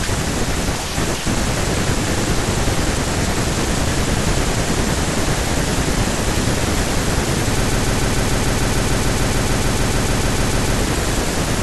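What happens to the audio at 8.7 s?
A broken-record loop runs from 7.64 to 10.79 s: a 148 ms fragment repeats exactly, 21 times back to back, likely from a stalled stream resending its last buffer, unlike an echo, which decays.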